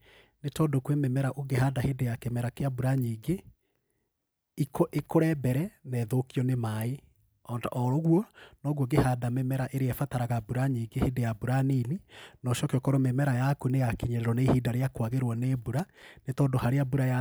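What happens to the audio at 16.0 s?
At 16.0 s the speech is hit by loose connector crackle, running from 15.79 to 16.03 s. A worn or dirty contact is making and breaking as it shifts, chopping the signal into an irregular burst of scratchy crackle lasting roughly a quarter second.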